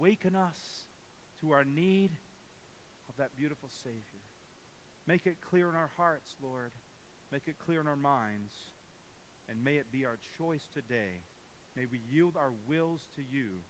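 No technical faults are audible.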